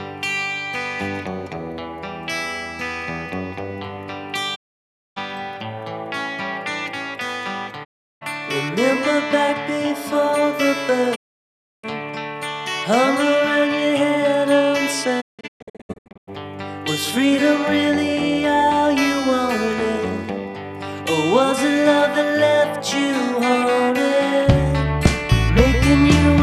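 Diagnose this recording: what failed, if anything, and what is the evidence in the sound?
Digital broadcast dropout at 4.54–5.18 s, 7.83–8.23 s, 11.14–11.85 s and 15.20–16.29 s, a failure in the broadcast reception path. Each time the sound fades to silence over about 20 ms, stays muted, then resumes further along. The last event is scattered into several short holes, the longest 0.17 s. The receiver was losing the signal or rejecting corrupted frames and muting until clean ones arrived. The gap lengths fit frames of about 24 ms, and the missing audio is unrecoverable.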